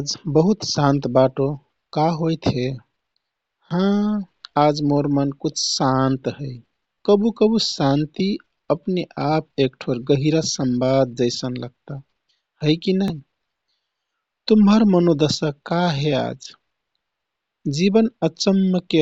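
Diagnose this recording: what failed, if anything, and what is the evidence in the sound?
Bluetooth stutter on the wireless link: the speech stutters briefly at 6.94–6.96 s (after "शान्त है", before "कबुकबु शान्ति अपने"), 13.08–13.12 s (after "है कि") and 15.34–15.36 s. Lost packets made the receiver replay its last slice, then resume downstream.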